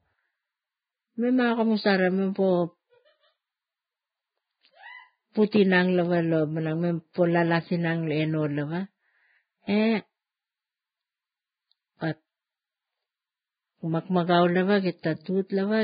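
From start to finish the speech sounds hissy and grainy, with nothing above about 4.9 kHz, so sibilants lose their edge and consonant onsets smear. The damage is heavy and points to low-quality Vorbis compression, likely at a very low bitrate around 13 kbps. At that rate the encoder cuts off the top band and quantises the remaining treble so coarsely that fine detail is replaced by noise of similar energy, roughening the tone.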